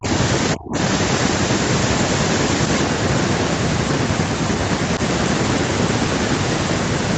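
From 0 to 0.08 s, the speech drops sharply by about 30 dB. From 0.54 to 0.78 s it sinks again, by about 35 dB. The likely cause is speech suppressed in double talk: the echo canceller mistook overlapping talk for echo.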